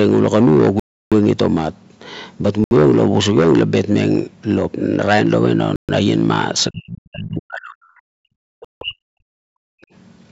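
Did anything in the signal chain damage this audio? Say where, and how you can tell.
Yes. Bluetooth stall, at 0.80 to 1.12 s, 2.64 to 2.71 s, 5.76 to 5.89 s and 8.65 to 8.81 s: the speech drops to dead silence for 71 to 321 ms and then resumes. This is likely the wireless link, where delayed packets let the headphone buffer run empty until they arrive.

Speech suppressed in double talk, at 6.70 to 7.79 s and 8.01 to 9.25 s: the speech sinks by up to roughly 40 dB in pieces. This likely happened in call processing, where the echo canceller could not tell the talker from the loudspeaker echo and attenuated both.

Background gated by the echo canceller, at 9.53 to 9.93 s: the room sound drops by about 40 dB for roughly 0.4 s and then returns. The canceller clamped the microphone while the loudspeaker was playing. The call filtering's ceiling at 8 kHz is normal.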